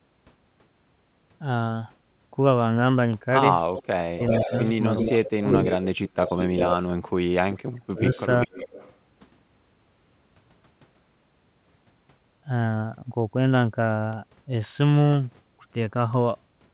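At 3.74 to 3.86 s an echo leak brings in a faint copy of the speech about 0.39 s late and about 15 dB down, likely a loudspeaker echo the canceller failed to remove. On a spectrogram it shows as a weaker repeat of the speech pattern, shifted right by that delay. At 4.16 to 4.31 s comes speech suppressed in double talk: the talker dips by about 10 dB for a short moment, most likely because the canceller could not separate the talker from the echo and ducked both. The waveform envelope narrows briefly there. From 4.29 to 6.73 s the echo leak returns much stronger, at about 5 dB below the speech and again about 0.39 s late, so the smeared doubled traces in the spectrogram are clearly visible. Within it, 5.04 to 5.46 s shows suppression of about 20 dB. From 7.53 to 8.51 s the speech is cut by up to about 40 dB in pieces, leaving near-empty gaps in the waveform. The echo leak then recurs from 8.14 to 8.9 s at about 15 dB down with a delay of about 0.4 s. 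Throughout, the call path's G.711 A-law coding leaves the spectrogram empty above 4 kHz.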